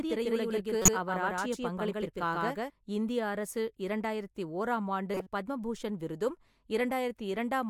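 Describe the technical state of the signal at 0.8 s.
At 0.8 s the signal carries a doubled audio track, already present when the clip opens and lasting until 2.7 s. A second full-band copy of the speech trails the original by about 150 ms at roughly equal level, likely from the same source being captured again through a slower path. It sounds like a dry, slapback echo with no room tail. On a spectrogram, every syllable's pattern repeats a fixed distance to the right, and the copy's edge at 2.7 s is abrupt.

Just after that moment, from 0.82 to 0.89 s, a corrupt frame was decoded. Damaged data across a couple of compressed frames was played anyway, so misread gains and codes placed energy at the wrong frequencies. The result is a brief squeak or noisy blip cutting across the speech, peaking near about -10 dBFS. A spectrogram shows a short rectangular smear of misplaced energy about two frames wide, and the waveform shows a sudden jagged burst.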